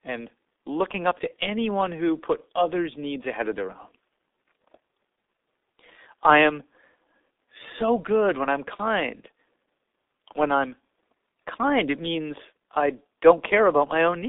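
Speech heard through the G.723.1 codec for its whole length: nothing above 3.8 kHz, a 250 Hz to 3.7 kHz band, and heavy hoarse, smeared consonants. The smearing, beyond plain band-limiting, points to roughly 6.3 kbit/s coding with slow 30 ms model updates.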